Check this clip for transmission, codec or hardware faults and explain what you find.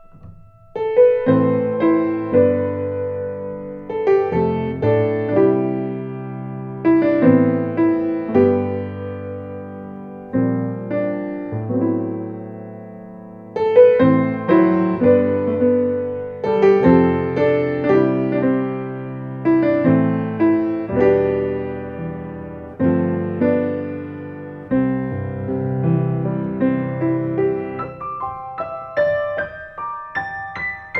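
No faults found.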